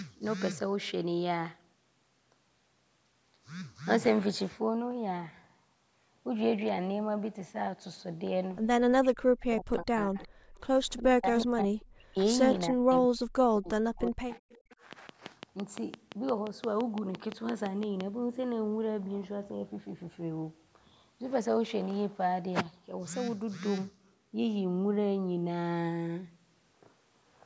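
Speech recorded through call microphone processing, with energy stopping at 8 kHz, and three kinds of fault. Between 9.01 and 14.4 s the voice repeatedly dips by up to about 40 dB, in four stretches: 9.01–10.29, 10.99–11.26, 11.44–12.19 and 12.69–14.4 s. This is likely speech suppressed in double talk, where the echo canceller could not separate its own talker from the loudspeaker echo and turned both down. On a spectrogram the harmonics fade or vanish in blocks, and the waveform envelope collapses. Echo leak appears at 10.22–10.28 s and 14.5–14.75 s as faint scraps of the voice returning 370 ms late, about 30 to 35 dB below the speech. These are delayed repeats of earlier spectral patterns. From 14.93 to 18.02 s a train of clicks ticks evenly at 5.85 per second, about 20 pulses peaking roughly 15 dB above the signal. They show as regularly spaced vertical lines spanning all frequencies and as sharp spikes on the waveform.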